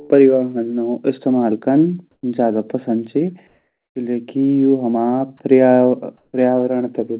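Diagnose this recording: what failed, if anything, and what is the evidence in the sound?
The fault sits in call processing: comfort noise in place of the background, three times. Just after "इस्तेमाल कन", from 2.11 to 2.23 s, then 3.47 to 3.95 s and 6.17 to 6.33 s, the faint room tone, about 55 to 59 dB below the loudest speech, turns smooth and featureless and shifts level by about 2 to 3 dB. The likely cause is discontinuous transmission: the sender stops between phrases and the receiver synthesises matched noise. On a spectrogram these gaps show as uniform grey blocks cut off at 4 kHz like the rest of the call-path audio. On the waveform they show as a small step in the noise floor.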